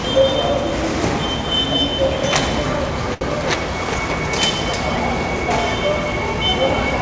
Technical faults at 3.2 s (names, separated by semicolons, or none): short stall from a late packet